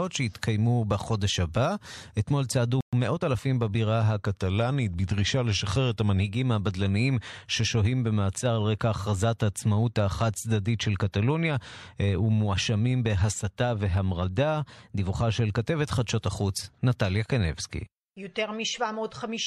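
At 2.81 to 2.93 s the speech cuts to silence for 120 ms, then resumes, likely a playback stall where the player briefly ran out of data. From 2.93 to 3.41 s the voice sounds hurried at unchanged pitch, running 1.25 times fast. This is time-compressed catch-up, with small pieces trimmed and cross-faded to clear the backlog. From 4.26 to 6.20 s the speech drops about a semitone (99 cents) and slows by 5.56%, then snaps back. From 14.64 to 15.21 s it rises 94 cents and speeds up 5.56%. Both are likely a drift correction step, with a clock-matching stage changing the rate in one jump to rebalance its buffer.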